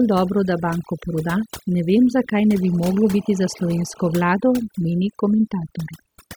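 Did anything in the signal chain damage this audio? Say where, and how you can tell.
Yes. Overdone noise removal runs throughout, a processing-stage fault. Bands near the noise floor are gated almost to silence, leaving twinkling specks between phrases. A spectrogram shows a black background dotted with isolated bright cells, and ragged, eaten-away edges on quieter speech.

GSM phone buzz enters in the analogue wiring from 2.61 to 4.13 s. A nearby 2G phone in a call is pulsing at 217 Hz, and the circuit rectifies the radio pulses into a hard, raspy buzz about 18 dB below the speech. A spectrogram shows steady horizontal lines at 217 Hz and many harmonics.

GSM signalling bursts follow from 4.14 to 6.30 s, again picked up in the analogue wiring. The phone is still in its call but sending only sparse burst groups, as when its user falls silent. The result is even ticks with a longer 217 Hz buzz twice a second, roughly 25 dB down. 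The waveform shows clustered spikes separated by gaps.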